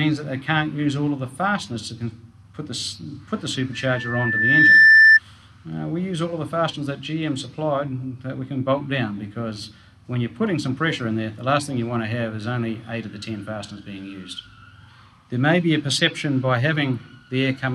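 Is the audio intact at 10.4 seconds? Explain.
Yes, at 10.4 s the audio is intact, with no dropout, click, distortion or other fault audible at that moment.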